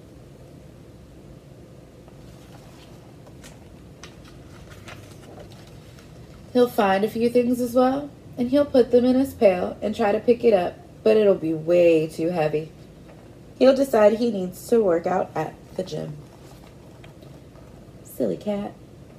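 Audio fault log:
No audible faults detected.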